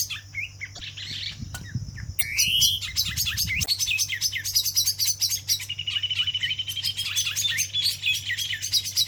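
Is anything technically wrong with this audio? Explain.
Yes. At 0.75–0.82 s, 2.18–2.23 s and 3.62–3.69 s the audio jumps ahead through a brief glitch, likely a broken MP3 bit reservoir: after missing frames, the next 26.1 ms frames decode borrowed bytes from the wrong frame.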